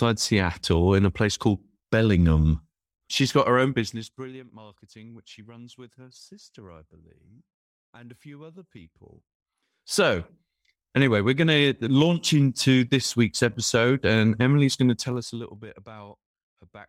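A speech clip with zipper noise during three level moves. After "got her own", from 3.76 to 4.44 s, the level drops by roughly 25 dB. After "and a few other", from 9.12 to 10.04 s, it rises by roughly 25 dB. From 14.88 to 15.6 s it falls by about 20 dB. Each move happens in unsmoothed 1 dB steps, around thirty a second. Every step clicks, so a fast ticking rides on the speech.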